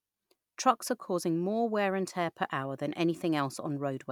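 Nothing technical goes wrong anywhere in this short bit of speech.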